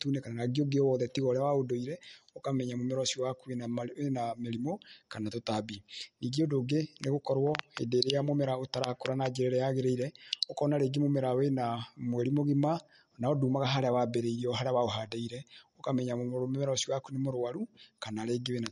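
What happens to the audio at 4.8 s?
At 4.8 s the speech carries the same damage heard throughout: nothing above about 11.2 kHz, and a watery, swirling quality on sibilants and onsets. The likely cause is MP3 compression at a bitrate low enough to starve the encoder, which fits roughly 48 kbps. The encoder trims the treble and drops weak frequency lines that flicker between frames. A simple low-pass filter would only dull the top, without this shifting, chirpy texture.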